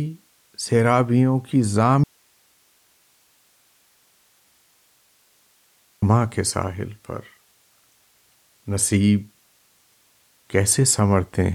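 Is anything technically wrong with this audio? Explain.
Yes. From 2.04 s to 6.02 s there is an audio dropout to a faint residue. The speech cuts off abruptly for about 4 s, leaving only hiss roughly 40 dB down. The likely cause is a lost source feed while the downstream path stayed live.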